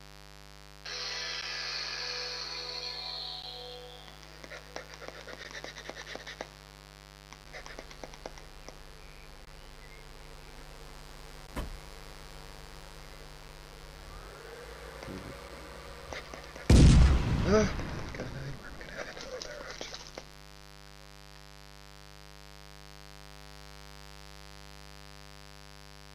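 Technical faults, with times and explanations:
Throughout: mains buzz. A steady, raspy 50 Hz buzz sits about 20 dB below the sound. Sharp switching spikes twice per cycle spread harmonics into the kilohertz range.
1.41, 3.42, 5.44, 7.45, 9.45 and 11.47 s: gap between stream segments. Hard-edged silent holes of 6 to 18 ms recur every 2 s. Segment time stamps leave gaps, which the player fills with silence.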